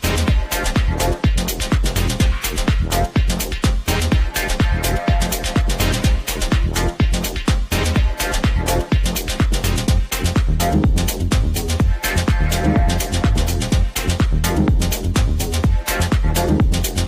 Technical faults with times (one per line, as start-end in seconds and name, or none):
none